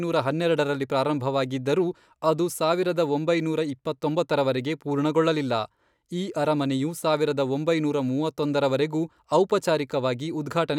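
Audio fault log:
Nothing to log here; I listened to the whole speech clip and didn't hear a single problem worth a line.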